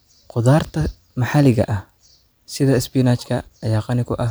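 No technical faults occur at any point in the speech.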